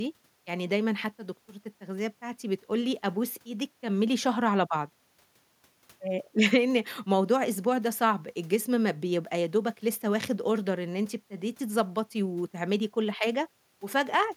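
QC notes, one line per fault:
Nothing stood out on listening to the speech in this clip.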